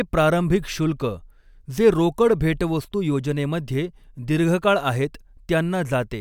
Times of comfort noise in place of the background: none

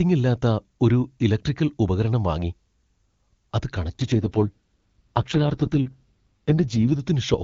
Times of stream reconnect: none

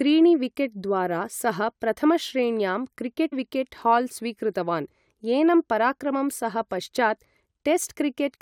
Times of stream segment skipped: 3.31

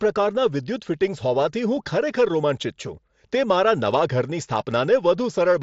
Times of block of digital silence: none

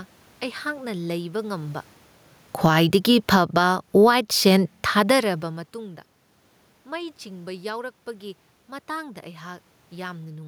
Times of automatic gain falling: 2.49-4.22

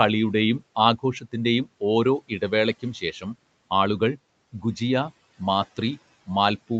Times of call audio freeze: none

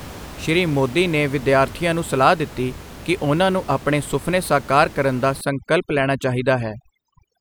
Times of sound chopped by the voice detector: none

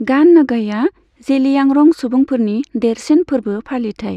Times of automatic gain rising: none

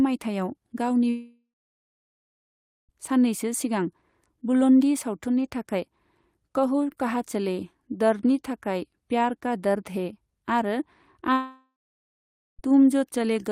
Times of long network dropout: 1.09-2.93, 11.33-12.62

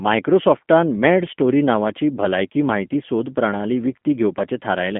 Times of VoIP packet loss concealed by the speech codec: none

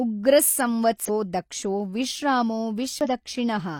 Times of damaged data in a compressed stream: 1.05-1.10, 3.01-3.06

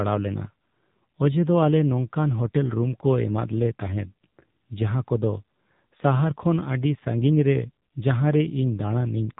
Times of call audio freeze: none

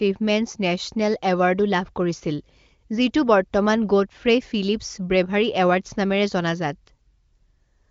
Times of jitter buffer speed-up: none

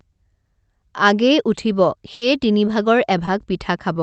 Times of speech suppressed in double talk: none

